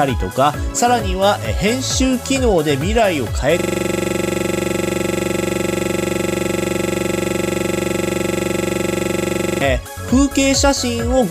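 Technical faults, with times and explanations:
3.59–9.61 s, system hang loop: the system froze while the audio hardware kept replaying its ring buffer. A 42.67 ms slice repeats about 140 times. At 23.4 Hz, this gives a rough, rapid stutter. The length fits a 2048-sample buffer.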